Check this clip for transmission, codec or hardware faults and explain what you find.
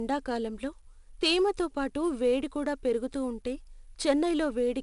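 One fault runs the full length of the speech: 4-bit ADPCM compression. Each sample is coded as a coarse 4-bit step from a predicted value, with the step size adapting as it goes, so the quantisation error is a broadband noise that rides up and down with the signal's level. It is heard as a plainly audible gritty hiss on every loud syllable, with roughness on sharp onsets. Nothing reaches above 10.6 kHz, and the rate points to roughly 88 kbps, which fits a sample rate near 22 kHz.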